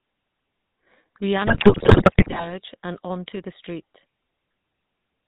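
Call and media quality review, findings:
GSM full-rate codec, whole clip: buzzy, gravelly speech with nothing above 4 kHz. Regular-pulse excitation through a vocal-tract filter. The roughness, not just dullness, separates it from a plain narrowband filter. Fits 13 kbps.

GSM bit errors, 1.46–2.52 s, ending just before "and onto the street": squawks, pops, gargling, sudden level jumps. Corrupted filter, pitch and gain values decoded as valid frames. Distorted sound rather than silent gaps, unlike packet loss.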